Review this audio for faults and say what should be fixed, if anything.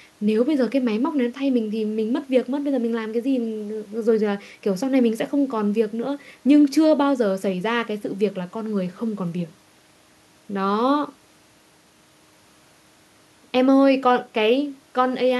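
No faults found in the speech recording; nothing needs fixing.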